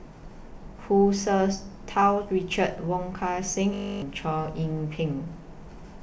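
A steady, rigid buzz replaces the speech from 3.74 to 4.02 s, pitched at 50 Hz. This is a system hang loop: the computer or audio driver froze while the sound hardware kept replaying its ring buffer. One 20 ms slice of speech repeats exactly 14 times, which fits a buffer of that length, and its repetition rate becomes the buzz's pitch. Roughly a third of a second of speech is lost.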